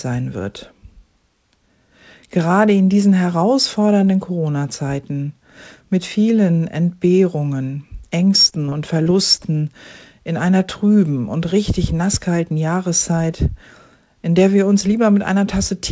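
From 8.50 to 9.47 s the audio breaks into repeated packet loss, the robotic kind. Six short gaps land close together, the longest about 21 ms. Each gap is filled by stretching the last received sound, about 107 ms of patching in all, so the stretch turns choppy, with small pieces missing. Throughout, nothing is heard above 8 kHz, which fits a G.722 call path.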